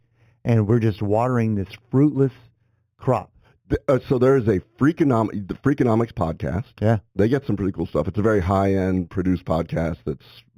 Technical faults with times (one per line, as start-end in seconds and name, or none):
0.00-10.57 imaging from linear upsampling